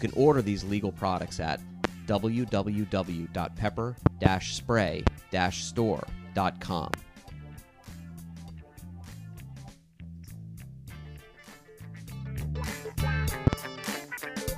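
Loud pops occur at 1.84–1.87 s, 4.06–4.28 s (two pops), 5.07–5.10 s, 6.94–6.96 s and 13.47–13.56 s (two pops), each roughly 25 dB above the signal while the sound carries on underneath. A voltage spike from a switch, plug or static is the likely cause.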